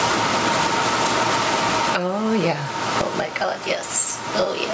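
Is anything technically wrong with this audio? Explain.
Yes, there's gain pumping all the way through. The gain swings by around 20 dB, so everything sounds squashed. The likely cause is input gain set far too high, with a fast limiter or compressor clamping down on every peak. The call-style microphone processing is fine; its top end stops around 8 kHz.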